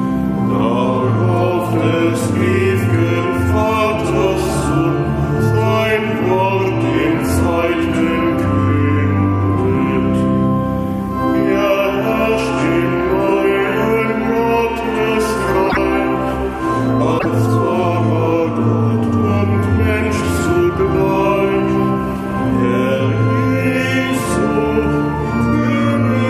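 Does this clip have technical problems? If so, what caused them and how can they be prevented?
Yes. At 15.69–15.77 s and 17.18–17.26 s the audio skips ahead and garbles for about 0.08 s, roughly three 26.1 ms frames. The likely cause is a broken MP3 bit reservoir: after a cut, frames look back for borrowed bytes and find bytes of another frame. A spectrogram shows a brief broadband smear or gap, and the waveform shows an abrupt discontinuity. Prevent it by cutting MP3 streams only with reservoir-aware tools, or by editing decoded audio and re-encoding.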